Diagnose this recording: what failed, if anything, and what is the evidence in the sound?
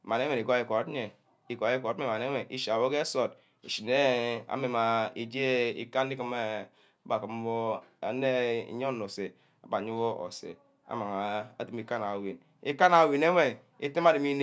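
Nothing failed; no stage shows any audible fault here.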